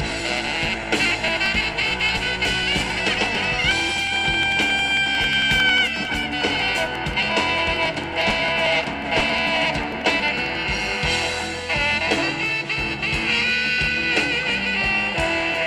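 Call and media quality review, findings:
Regular ticks and pops, 0.11 s to 10.55 s, every 0.09 s, about a hundred events. Periodic USB or driver dropouts: bus or driver stalls on a fixed cycle, around 10 ms skipped each time, no fill.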